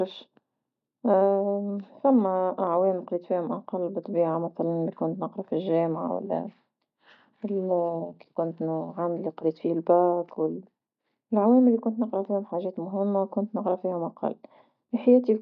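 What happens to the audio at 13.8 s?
Nothing goes wrong at 13.8 s; the speech carries on intact through that moment with no dropout, click or distortion.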